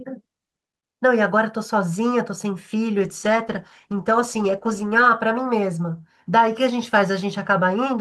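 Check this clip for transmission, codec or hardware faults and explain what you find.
One transmission fault is present: a call bitrate drop from 3.0 to 5.13 s. The bandwidth estimate fell, so the encoder went from 48 kbps to 15 kbps for about 2.07 s. With far fewer bits, the speech is coded more coarsely and sounds rough and watery until the rate recovers.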